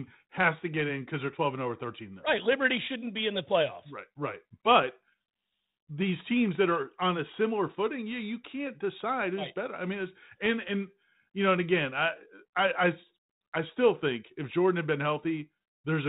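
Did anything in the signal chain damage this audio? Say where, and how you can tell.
No, nothing damaged this audio.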